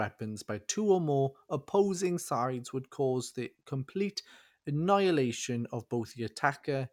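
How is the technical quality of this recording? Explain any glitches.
The speech recording has no technical glitches or signal faults that can be heard.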